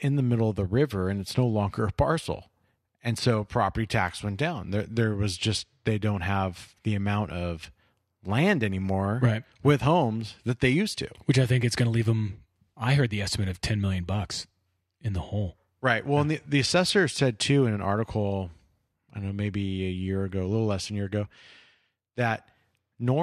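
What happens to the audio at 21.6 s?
Nothing goes wrong at 21.6 s; the speech runs on intact through that moment, with no dropout, click, distortion or other fault to be heard.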